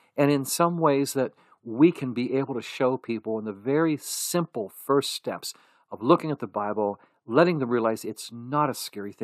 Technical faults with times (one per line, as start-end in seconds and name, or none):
none